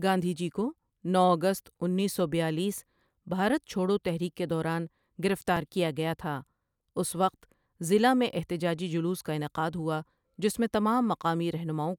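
A speech recording with a single fault at 5.57 s: a brief skip where the sound jumps forward by a few milliseconds with no gap, likely a dropped buffer (overrun). The waveform shows a sudden discontinuity, and the spectrogram shows a thin vertical broadband streak.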